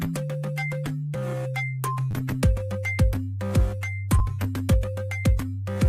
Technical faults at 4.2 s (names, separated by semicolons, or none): repeated buffer